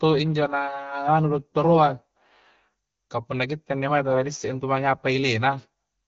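No technical faults can be heard in this speech, which comes through the AMR wideband (HD Voice) codec at 15.85 kbit/s with nothing above about 6.9 kHz.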